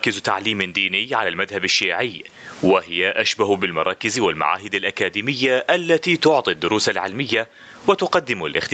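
Speech over a call line, band-limited to about 8 kHz, with gain pumping through the whole clip. The gain swings by around 20 dB. That's likely the mic gain set way too hot with a fast limiter clamping down on every peak, which squashes the dynamics.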